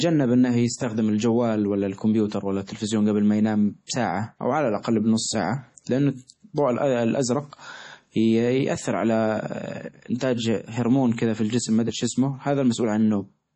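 Across the whole speech clip the treble stops dead at about 11.2 kHz, and the upper range has a watery, swirling texture, with sibilants turning metallic and chirpy. That is likely heavy MP3 compression at a low bitrate, around 32 kbps. Starved of bits, the encoder cuts the top band and lets weak frequency lines drop in and out from frame to frame. Plain low-pass filtering would also dull the sound, but it would not produce this flickering warble.

Pre-echo appears three times: at 3.87 to 3.89 s, at 10.18 to 10.21 s, and at 11.16 to 11.18 s. Each is a brief hiss of about 27, 27 and 22 ms that runs just ahead of a sharp onset, which then sounds softened. The codec spreads noise meant for the loud attack across its whole block, so the hiss leaks into the quiet moment before it. Because the noise comes before the attack rather than trailing after it, it cannot be reverb or a click.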